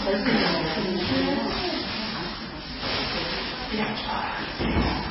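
From start to end, the treble stops dead at about 5.6 kHz. Weak detail flickers in and out, giving a watery, swirly texture, and attacks are smeared. This is heavy damage, likely from MP3 compression at a very low bitrate, near 16 kbps.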